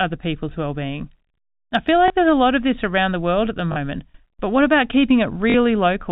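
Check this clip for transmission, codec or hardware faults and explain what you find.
Three brief dropouts are concealed by packet loss with the last packet repeated, at 2.08 to 2.10 s, 3.72 to 3.76 s and 5.50 to 5.54 s. Each gap, 20 or 40 ms long, which fits one or two 20 ms packets, is filled by replaying the previous packet. The single repeat gives a small blip, and the two-packet runs a short robotic stutter. The G.711 telephone coding keeps everything below 4 kHz.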